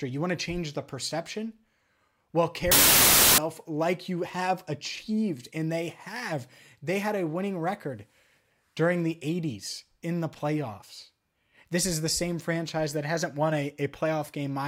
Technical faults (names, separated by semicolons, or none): wrong sample width